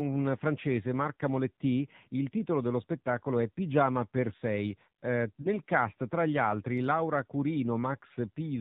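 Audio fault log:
Throughout, AMR narrowband mobile codec: the speech is clearly buzzy and synthetic, which fits the 7.4 kbps mode. The spectrogram shows a hard ceiling at 4 kHz with nothing above it, and smeared, pulse-driven harmonics below it.
5.42 to 5.51 s and 8.14 to 8.17 s, lost AMR speech frames: each gap sounds like a brief dip or warble, consistent with a single lost 20 ms frame. The decoder repeats the previous pitch and vocal-tract settings at reduced gain, so the waveform shows a short amplitude sag and the spectrogram a blurred, held patch.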